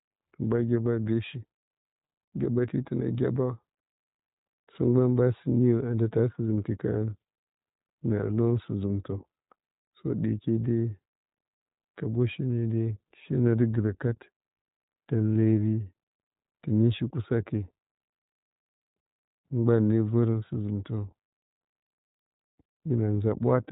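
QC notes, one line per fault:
Throughout: iLBC codec. The speech has been passed through this narrowband VoIP codec, which rebuilds the excitation of each 20 ms frame on its own, without borrowing from the previous frame, at a rate that fits its 15.2 kbps mode. Everything above about 3.8 kHz is gone, so consonants lose their crispness and the voice sounds boxed-in. The frame-by-frame coding leaves a plainly audible rough, slightly synthetic grain on the speech.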